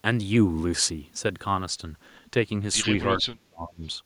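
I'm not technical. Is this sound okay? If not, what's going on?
No. From 3.22 to 3.82 seconds there is speech suppressed in double talk: the speech suddenly sinks to almost nothing for a little over half a second, then comes back. This likely happened because someone on the other end of the call spoke at the same moment. The system that removes speaker echo couldn't tell this talker apart from the echo, so it turned everything down together and swallowed this talker's speech too.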